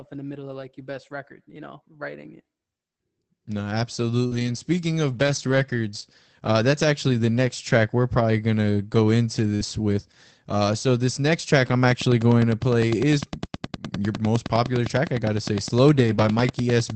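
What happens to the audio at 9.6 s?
Right at 9.55 to 9.61 s there is a short concealed packet loss: about 40 ms never arrived, so the decoder extended the preceding sound and blended back in. It comes across as a brief smear or wobble, with no silent gap.

Overlapping it, from 9.59 to 9.65 s, is a lost packet rebuilt from error correction. About 40 ms, which fits two lost packets, was played from the low-bitrate backup copies carried in later packets. Unlike the concealed stretch, which is a guess, this audio is real but coarser and noisier.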